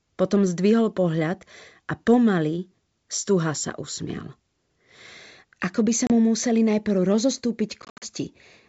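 At 6.07 s the speech drops out for about 30 ms. This is packet loss on an ADPCM call, likely a few packets. The gap is filled with hard-edged silence. The decoder's predictor and step size lose track of the sender's, so the speech resumes with brief distortion before settling. From 7.82 to 8.07 s the losses repeat: about 150 ms missing, scattered over 200 ms, the longest hole 70 ms. The wideband G.722 sound around these holes stays clear.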